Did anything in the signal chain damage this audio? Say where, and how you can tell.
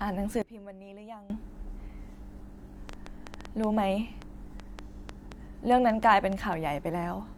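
Yes. From 0.42 s to 1.30 s the speech and its background noise drop together by about 19 dB, then return, with the level changing instantly at each edge rather than fading. Because the noise floor falls in step with the speech, this is a sudden gain jump applied to the whole signal, not a change at the microphone. The cause is likely a digital gain setting or bit shift in processing, switched between one sample and the next with no ramp.

A train of clicks runs from 2.89 s to 6.54 s: roughly twenty sharp ticks of similar shape, about 4.7 per second on average but unevenly spaced. They peak around 10 dB above the speech and continue through the pauses, so they sit on top of the signal rather than coming from it. The pattern most likely points to a faulty connection or power supply, or to interference from nearby equipment.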